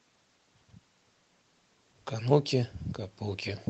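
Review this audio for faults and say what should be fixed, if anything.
Nothing here needs fixing.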